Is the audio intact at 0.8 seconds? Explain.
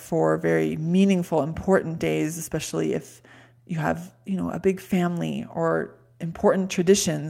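Yes, the speech at 0.8 seconds plays through intact, with no audible fault at that moment.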